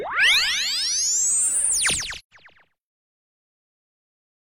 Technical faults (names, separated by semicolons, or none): AAC frame loss with muting